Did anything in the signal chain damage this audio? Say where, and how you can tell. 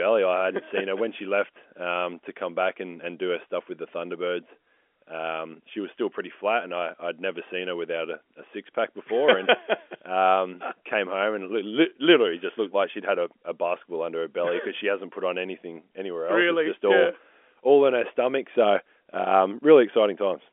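No, nothing in the chain has damaged this speech; it has simply come over a G.711 A-law telephone path at 64 kbps, which explains the narrow 250 Hz to 3.4 kHz line band with nothing above about 3.8 kHz.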